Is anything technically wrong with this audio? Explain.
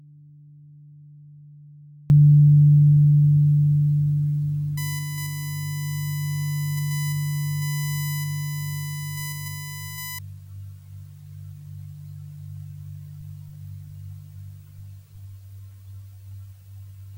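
Yes, there are two faults.

From the very start until 2.1 s there is an audio dropout to a faint residue. The sound is already missing when the clip begins, leaving only a faint trace far below its normal level, then returns abruptly. The likely cause is the wanted signal being lost while the path after the break stayed live. The sudden return is what separates it from a fade.

From 4.77 s to 10.19 s a USB whine sits well below the main sound. It is a fixed-pitch tone on a 1 kHz series, strongest at 2 kHz, leaking in from USB frame activity through power or ground. That 1 kHz spacing distinguishes it from mains hum, which sits on 50 or 60 Hz multiples.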